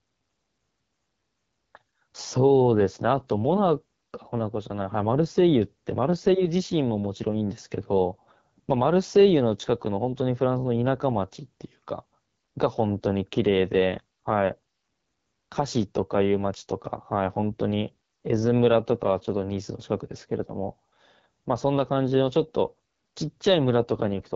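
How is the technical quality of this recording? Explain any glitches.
The recording has one fault, present for the whole clip: plainly audible AMR wideband (HD Voice) codec damage.

AMR wideband (HD Voice) codec, throughout: the speech is rebuilt from a pulse-excited vocal tract model, with the upper band filled by shaped noise. At this low rate, which points to the 8.85 kbit/s mode, the voice sounds plainly rough and raspy, and nothing is present above 7.3 kHz.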